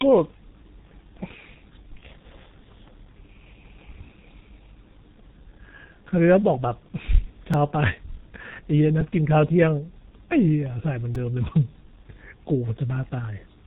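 G.723.1 codec damage runs through the whole speech clip. The low-rate coder, heavy here and consistent with roughly 6.3 kbit/s, cuts everything above 3.8 kHz and refreshes its voice model only every 30 ms frame, so the speech sounds muffled and hoarse with smeared consonants.

Repeated buffers occur at 7.54 s, 9.01 s and 11.15 s. Each time, fresh audio arrived late and the same piece of about 2.67 ms, which fits a 128-sample buffer, was played again: once, three times, then four times. With such short segments, each repeat is heard as a click or a brief buzz, not a stutter.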